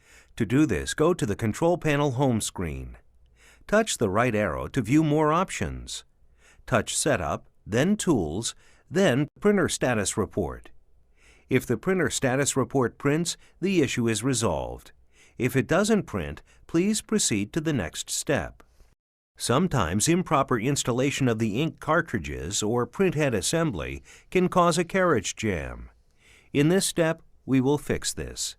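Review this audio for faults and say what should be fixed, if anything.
Nothing stood out on listening, so there is nothing here that calls for a fix.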